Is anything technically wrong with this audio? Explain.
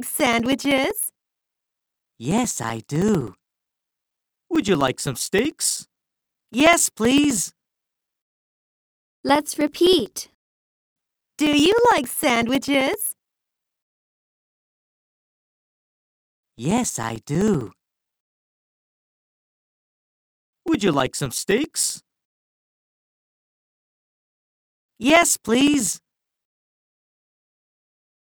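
Yes. From 0.07 to 28.24 s, regular ticks every 64 ms mark periodic USB or driver dropouts: the bus or driver stalls, replacing a few milliseconds with silence.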